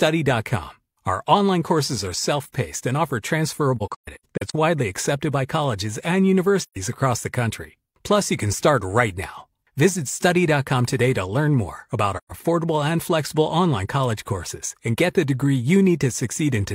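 AAC frame loss with muting leaves soft-edged gaps at 3.77 to 4.55 s (after "self paced and offer", several dropouts, the longest about 150 ms), 6.62 to 6.76 s (after "accepted by colleges and") and 12.17 to 12.32 s (after "to learn more about"). The decoder zeroed the missing frames' spectrum, so the sound fades out and back in. The waveform shows tapered flat stretches, and the spectrogram shows full-band blank columns.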